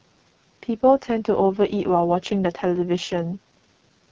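From the first moment to the end, the speech carries the signature of the AMR wideband (HD Voice) codec run at its lowest mode, which sounds like 6.6 kbit/s. The heavy damage comes out as a rough, raspy buzz, because the pulse-driven vocal tract model has too few bits to shape the excitation. The top band above 6.4 kHz is thin, noise-like hiss rather than real detail. That separates it from narrowband telephone coding, which simply stops near 3.4 kHz.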